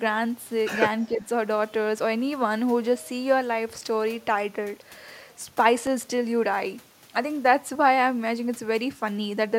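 From 1.09 to 1.28 s the speech sinks briefly, a modest dip of roughly 5 dB lasting about a fifth of a second. This is likely speech suppressed in double talk: with both ends talking at once, the echo canceller mistook this talker for loudspeaker echo and attenuated it.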